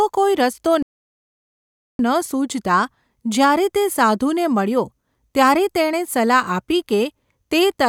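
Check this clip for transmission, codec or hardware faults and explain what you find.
One fault is present: a playback stall from 0.83 s to 1.99 s. The speech cuts off in mid-flow and the output drops to silence for about 1.17 seconds before the sound resumes. The likely cause is the player running out of buffered data, or its playback thread being blocked, so nothing reached the output until it recovered. To the ear it is an abrupt dead gap that interrupts the speech rather than a natural pause.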